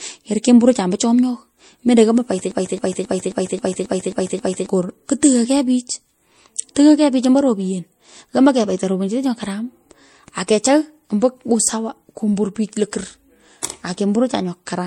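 A speech recording whose whole length carries two layers of compression damage at once: the artefacts of two different codecs heard together, with nothing at all above about 16.6 kHz. That layered texture points to transcoding between lossy codecs, likely an MP3 encode at a low rate, around 64 kbit/s, re-encoded to Vorbis at a similar rate, each stage adding its own artefacts to the last. On a spectrogram this shows as a hard ceiling at 16.6 kHz and patchy, blocky high-frequency detail. From 2.51 s to 4.69 s there is a broken-record loop: a 268 ms fragment repeats back to back eight times, so the sound stutters mechanically while the speech that should have followed is lost. The likely cause is a stalled player or stream that kept resending its last buffered piece. In the waveform this appears as an identical 268 ms shape tiled across those two seconds, and on a spectrogram as the same block copied side by side.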